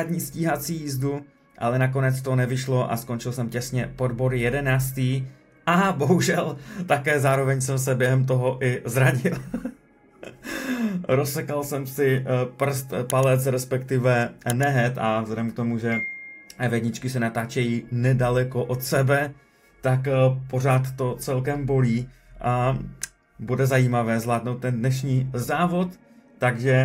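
Nothing is technically wrong with this audio, and no faults can be heard anywhere in it.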